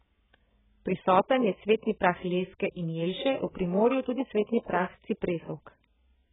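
The speech is dull and warbling throughout, with nothing above 3.8 kHz. A spectrogram shows a hard ceiling, likely from low-bitrate AAC compression.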